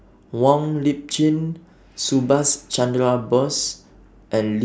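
Nothing in the speech here trips any alarms, with no dropouts, clicks, glitches or other technical trouble turning up anywhere in the recording.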